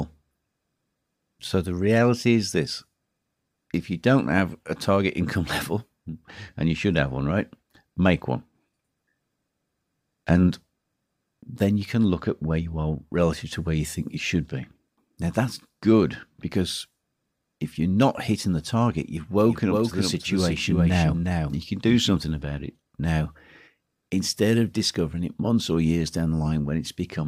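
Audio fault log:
19.39–22.17 s, doubled audio track: after "hitting the target you've", the speech gains a dry, full-band second copy trailing roughly 400 ms behind and about 5 dB quieter, starting and stopping abruptly before "about it now", likely from a slower second capture path or misaligned edit.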